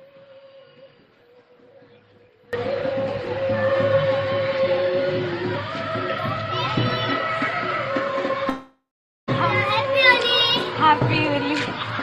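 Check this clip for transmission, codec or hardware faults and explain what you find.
Two faults are audible: a dropout at the very start and a brief call audio freeze later on.

From the opening until 2.53 s there is an audio dropout to a faint residue, already under way when the clip begins. The signal was likely lost upstream while the path stayed live, so only a faint leak about 25 dB below normal remains. On the waveform, a thin low band jumps abruptly to normal level.

From 8.49 to 9.30 s there is a call audio freeze. The jitter buffer likely ran empty while packets were delayed, so the last sound is stretched into a fading buzz or hiss, followed by roughly 0.46 s of silence. The spectrogram shows smeared horizontal streaks, then a blank gap. The audio resumes where it stopped, adding about 0.78 s of delay with nothing lost.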